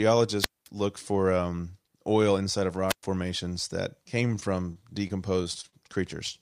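From 0.39 to 0.68 s, just before "looked for um oil", a wireless microphone squelch dropout occurs. The FM radio link from the transmitter weakens enough that the receiver's squelch closes and mutes its output, leaving a hole of near silence of about 0.22 s before the signal recovers. The same fault repeats from 2.88 to 3.03 s, between "um oil inside of" and "formations that", this time with a shorter mute of about 0.11 s, heard as a brief rise of hiss and a hole of near silence.

From 4.27 to 5.74 s, right after "formations that", repeated packet loss produces choppy sound with pieces missing. Audio data arrived late or not at all again and again across this stretch, and the decoder filled each hole by extending the last sound it had, none of the holes longer than about 32 ms. Roughly 0.18 s of this span is synthetic fill, and about 0.1 s of the original audio is missing outright.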